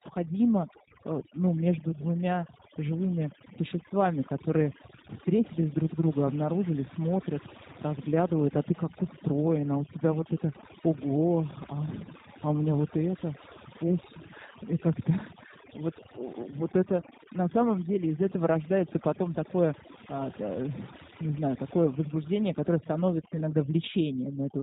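From start to finish, overdone noise removal is at work: the reduction was set so aggressively that frequency bands near the noise estimate are cut to almost nothing, taking quiet speech detail too. Gaps fall to near silence with twinkling specks. A spectrogram shows a blank floor scattered with isolated bright dots and ragged holes in the voice's quieter harmonics.

Layered over this for the whole clip is plainly audible G.729 codec damage, consistent with the G.729A variant at around 8 kbit/s. It rebuilds the voice from a vocal tract filter, pitch predictor and sparse pulses, so the speech sounds rough and synthetic. On a spectrogram, energy stops sharply at 4 kHz.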